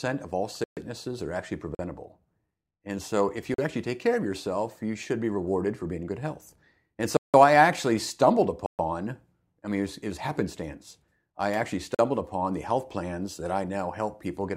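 Speech with six blocks of digital silence, each a hard cut to zero. They fall at 0.64 s (128 ms, right after "of all"), 1.75 s, 3.54 s, 7.17 s (171 ms), 8.66 s (128 ms, after "I actually stumbled") and 11.95 s. The shortest gaps are about 43 ms, and every length fits a whole multiple of a 2048-sample buffer, which points to output buffers that weren't filled in time.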